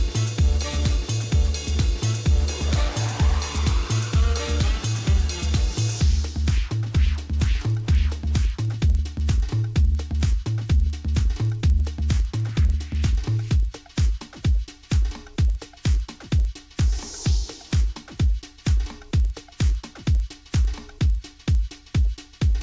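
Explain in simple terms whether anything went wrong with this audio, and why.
The sample-rate converter was restarted on every block of audio, treating each short chunk as if it stood alone. Each chunk's edges come out slightly wrong, so throughout the clip a buzz at 20 ticks per second rides along wherever there is sound, which fits blocks about 50 ms long.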